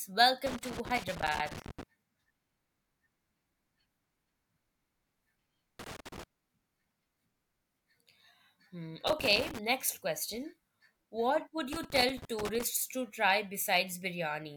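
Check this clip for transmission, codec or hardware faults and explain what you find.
There's a hardware fault: loose connector crackle, in four bursts, at 0.47–1.83 s, 5.79–6.23 s, 9.07–9.59 s and 11.73–12.63 s, the last one just before "to try". A worn or dirty contact somewhere in the chain is making and breaking as it shifts, chopping the speech on and off and throwing in pops from any DC on the line. You hear it as ragged, irregular scratching over the speech.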